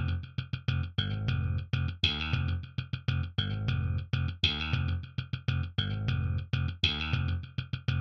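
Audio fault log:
2.08 s dropped samples: a single sharp click, likely from roughly one missing sample, so the waveform jumps abruptly to a later value.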